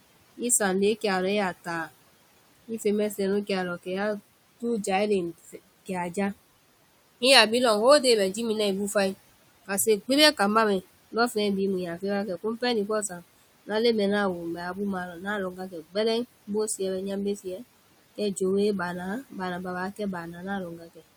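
Noise suppressor artifacts run throughout: the suppressor pushes the room noise, about 20 dB under the speech, down by about 18 dB in gaps, leaving a fluttering, pumping residue.

Speech cut by the noise suppressor occurs at 2.68–3.87 s, 5.45–6.17 s after "jae léŋ", 12.01–13.7 s between "bhii mu yaa" and "leŋ mɛɛ ŋna a", 14.56–17.61 s and 19.96–21.03 s. Quiet speech mistaken for noise drops by about 13–18 dB and sounds swallowed. The longest loss, roughly 0.7 s in all, falls in the 14.56–17.61 s stretch.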